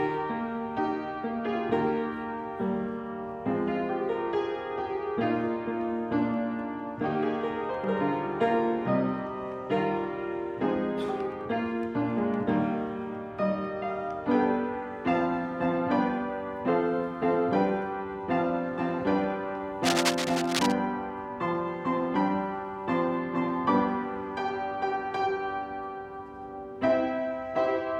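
Cable scratch noise runs from 19.83 to 20.72 s, a burst of rough, uneven scratching and rustling laid over the sound for just under a second, sitting only a little below the main signal in level. The likely cause is a worn cable, connector or control being moved at that moment, so its contact resistance jumps about rapidly and injects dense, irregular noise into the audio path until the contact settles again.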